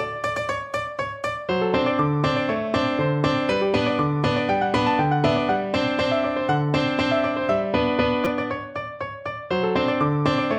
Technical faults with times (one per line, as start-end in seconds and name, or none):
8.25 repeated buffer